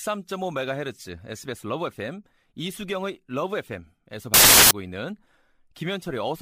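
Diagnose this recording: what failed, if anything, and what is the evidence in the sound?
The sample-format conversion stage failed: between 4.34 and 4.71 s the speech gives way to loud, harsh broadband noise. These are samples built from the wrong bytes; misaligned or swapped bytes push the rapidly changing low-order bits into the most significant positions, so every value becomes essentially random.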